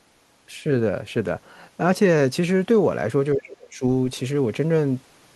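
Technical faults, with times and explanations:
3.34–3.82 s, speech suppressed in double talk: the speech drops roughly 30 dB, likely because an echo canceller muted the near talker while the far end spoke.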